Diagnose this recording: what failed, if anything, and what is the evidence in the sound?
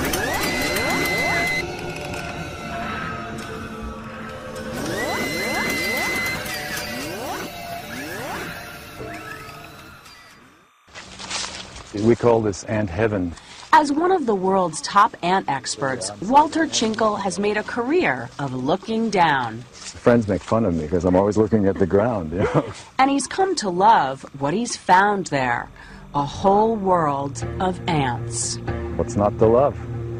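Timecode bleed in the analogue wiring: a faint, steady chirping warble runs throughout, well below the sound, consistent with 29.97-frame code. A spectrogram shows constant bands near 1 and 2 kHz.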